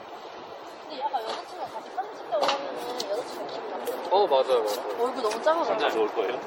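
Throughout the recording the sound is swirly, smeared and hollow, with blurred attacks and nothing above 16.5 kHz. This is likely generation loss: about ten rounds of MP3 encoding and decoding, fitting 64 kbit/s, each re-quantising on a shifted frame grid.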